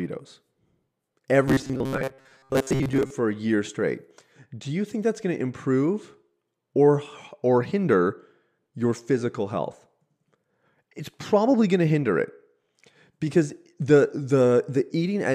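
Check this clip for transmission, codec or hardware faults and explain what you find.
One fault stands out: robotic sound from repeated short buffers, from 1.48 to 3.10 s, ending just before "for a year straight". New audio likely arrived too seldom, so playback looped a chunk of about 7.5 ms in place of most of the real signal. That forces a rigid, metallic 134 Hz buzz onto the speech, which it follows only loosely.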